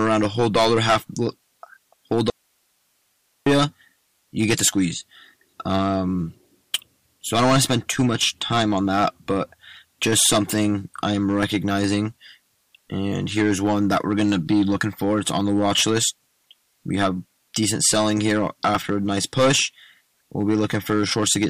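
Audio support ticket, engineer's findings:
Harsh fuzz on every loud passage, whole clip. Hard clipping: level driven roughly 15 dB past what a stage can pass, so a few percent of samples are flattened. The squared-off peaks throw harmonics high into the spectrum, heard as crackle riding on peaks and grit on sustained loud sections. Probable component: gain stage or converter input ahead of capture. Pull input gain down; the flattened peaks cannot be recovered.

Abrupt cut at 2.30 s, sound back at 3.46 s, about 1.16 s missing. Audio dropout to a faint residue: only hiss fills the gap, about 45 dB under normal signal level, with hard edges, not a pause or fade. The path downstream stayed live while the source feed was lost. Likely cause: intermittent connection or momentary source interruption before the recording input. Check cabling and the source link.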